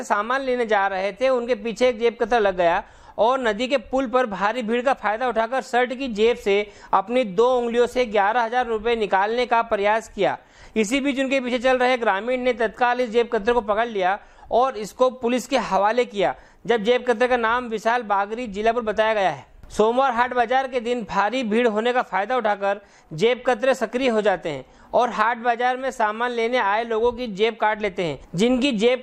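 No technical faults can be heard anywhere in the audio; the signal stays steady and intact throughout.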